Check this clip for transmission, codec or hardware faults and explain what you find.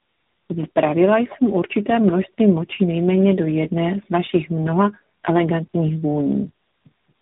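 One fault is present, and it runs through the whole clip.

Tandem speech coding, throughout: the speech seems to have been decoded and re-encoded by about three speech codecs in a row, each compounding the last one's damage. It sounds rough, muffled and warbly, with nothing above 3.8 kHz.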